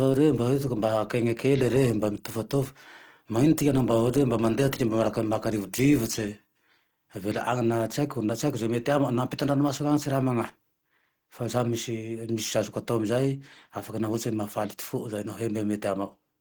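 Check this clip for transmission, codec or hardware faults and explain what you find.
One codec fault runs through the whole speech clip. From start to finish the voice sounds hoarse and muffled, with a rough, grainy texture over its upper detail, though the band still reaches about 20.2 kHz. This is likely Opus compression in its hybrid mode. A speech-oriented core carries the lower band, while the upper band is rebuilt coarsely from band energies with folded or noise fill. That damage is plainly audible and points to a low bitrate of around 16 kbps.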